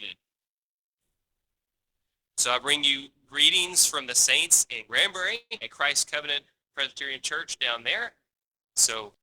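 From 5.35 to 5.64 s the sound smears into a fading buzz, then brief silence, resuming with about 120 ms gone, likely a long network dropout. From 8.05 to 8.74 s the audio drags at 93% speed, same pitch, gaining 55 ms, as a jitter buffer slow-down repeats pitch periods to rebuild its reserve.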